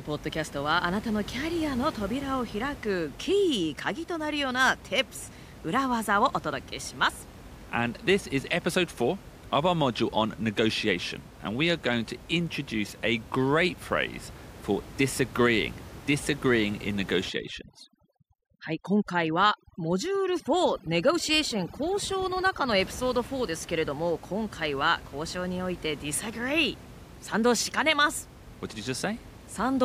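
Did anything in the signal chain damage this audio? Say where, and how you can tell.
Yes. From 17.29 to 22.80 s, between "for disagreeing disagreeing in" and "ピソード", the background drops to near-silence sprinkled with twinkling specks. This is overdone noise removal in call processing: an over-strong suppressor shuts off individual frequency bands, taking quiet speech with them.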